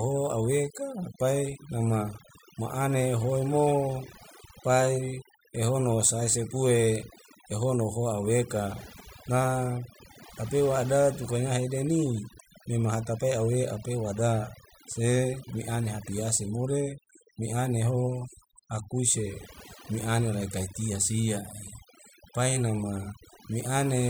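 From start to finish, the speech carries overdone noise removal. A noise reduction stage was set far too aggressively. It pulls individual frequency bands down hard whenever they sit close to its idea of the noise floor. The quiet parts of the voice fall into that range and get cut too. Between phrases the background drops to near silence, dotted with twinkling specks.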